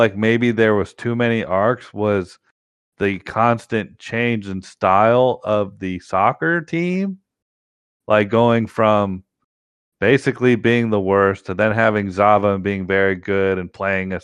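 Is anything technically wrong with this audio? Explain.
Yes, there are two faults.

Throughout the speech, the sound is dull and grainy, with a gurgling roughness and upper frequencies that flicker in and out. This is likely MP2 compression at a low bitrate, around 80 kbps. Too few bits force Layer II to switch off upper sub-bands and quantise the remaining ones coarsely.

At 1.05 s and again from 6.89 to 6.99 s there is DAB burbling. Bit errors slipped past error correction into the MP2 data, corrupting samples, so individual sub-bands get short blips of noise. Each event is a brief burst of burbling over the speech. The first is a tiny blip from a very low error rate. The second is longer, fitting a few corrupted frames and a somewhat higher error rate.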